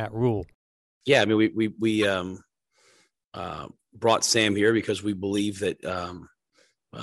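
Flipped bits inside compressed frames were decoded as if valid, so a corrupt frame decoded twice puts energy at wrong frequencies. At 2.02 s, after "mean we we we", one damaged frame produces a loud, brief blip peaking high in level. At 5.38 s, after "here because we", the sound suggests a couple of damaged frames, giving a quieter, short squeak well below the first.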